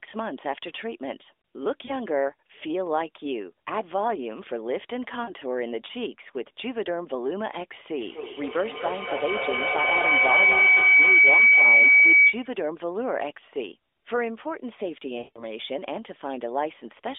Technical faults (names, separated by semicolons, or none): lost AMR speech frames